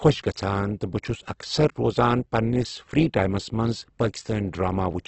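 From start to finish the speech carries Opus compression damage, and it is heavy. Nothing reaches above 8.2 kHz, so the top octave is missing and sibilants sound dull. What remains is rough and grainy, with voiced tones turned noisy, which fits the encoder's music mode, likely running near 12 kbps. At that rate it keeps the energy in each band but fills detail by folding lower bands or injecting noise, so texture replaces clean harmonics.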